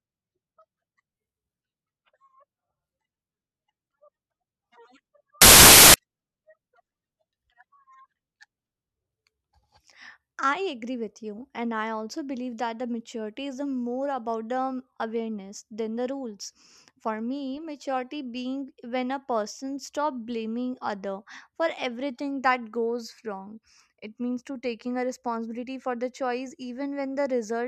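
A speech recording with one fault: from 5.42 to 5.94 s, roughly half a second, the signal turns into loud, harsh broadband noise, the signature of samples built from the wrong bytes. The reader assembles each sample with its bytes misordered or misaligned by one, so the rapidly varying low-order bits land in the high-order position. The result is harsh noise in place of the speech for that stretch.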